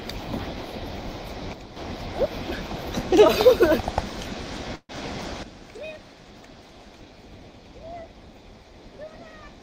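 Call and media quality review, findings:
Sudden gain jump, 1.53–1.77 s (about 7 dB down, then back) and 5.43 s to end (about 12 dB down). Level and background noise step together instantly, with no ramp, unlike AGC pumping. Likely an unramped digital gain setting.

Call audio freeze, 4.75–4.92 s. The last sound is stretched as a fading buzz or hiss for about 137 ms, with the final 50 ms silent. Playback resumes exactly where it stopped, so nothing is lost, unlike a loss gap. Latency grows by 137 ms. Likely jitter buffer underrun.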